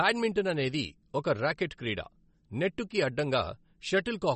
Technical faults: MP3 compression

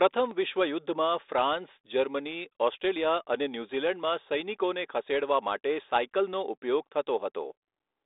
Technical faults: none

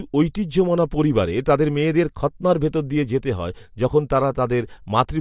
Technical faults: none

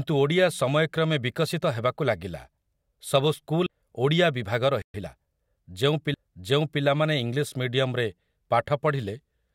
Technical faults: CD skip; playback stall; time-compressed catch-up

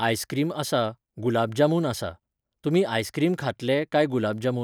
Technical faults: none

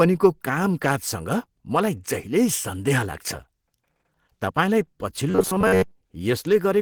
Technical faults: Opus compression; robotic sound from repeated short buffers

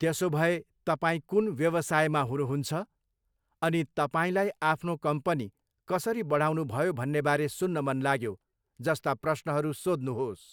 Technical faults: none

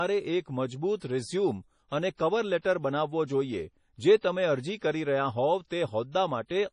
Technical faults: MP3 compression; pre-echo

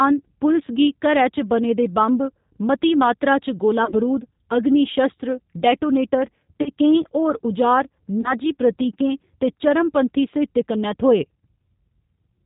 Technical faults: G.729 codec; VoIP packet loss concealed by the speech codec

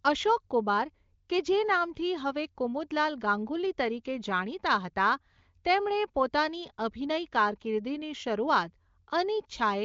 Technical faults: none

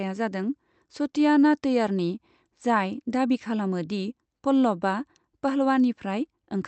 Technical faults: none

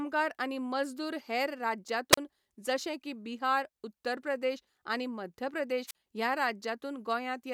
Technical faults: wireless microphone squelch dropout

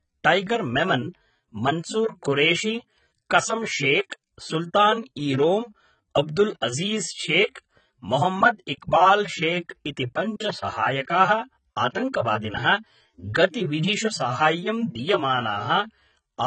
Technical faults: AAC compression

